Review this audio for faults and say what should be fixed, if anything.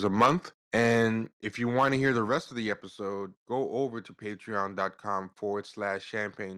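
Right at the start, from 0.05 to 0.31 s, there's microphone overload: the peaks run about 10 dB past the converter's ceiling, so a few percent of the waveform gets its tops sheared flat, and you hear a crunchy, crackly edge on the loudest bits. It comes back from 1.78 to 2.34 s, between "if you" and "of the episode go", milder at about 4 dB over with around one percent of samples flattened. The likely cause is the mic input gain simply being set too hot. Pull the input gain down so the loudest speech peaks sit well under full scale.

There are also two microphone volume step-downs, where the level of the speech and the background drops abruptly in one go. The first is at 0.26 s, about 3 dB, landing just as that opening overload ends. The second is at 1.26 s, about 4 dB, right before "if you". These are likely the call software's automatic gain control reacting to the hot input and cutting the device volume. 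Set a sensible fixed input level and turn off automatic mic adjustment in the call app.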